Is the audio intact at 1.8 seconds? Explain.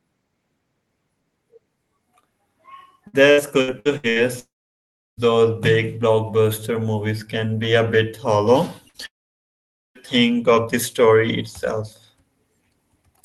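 Yes, the speech at 1.8 seconds is intact, with no dropout, glitch or other fault at that moment.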